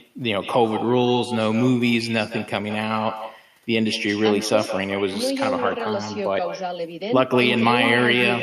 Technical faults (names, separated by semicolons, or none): echo with no canceller